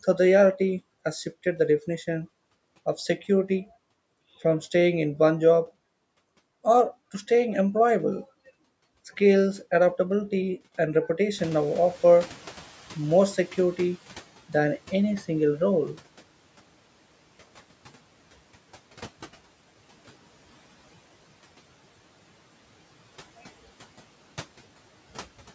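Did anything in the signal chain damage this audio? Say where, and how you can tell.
Yes. At 11.38 s the room noise jumps by about 17 dB and comes through with less reduction at first, then gradually sinks until it settles at 14.26 s, about 11 dB lower than at its peak. This is the noise suppressor catching up, in the call processing stage. Its noise estimate lagged behind the sudden rise and took about 2.9 s to adapt, so the suppression only tightened once that estimate matched the louder background.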